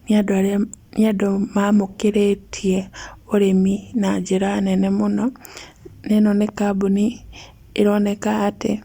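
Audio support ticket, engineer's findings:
No fault found in the speech audio; nothing to report for this ticket.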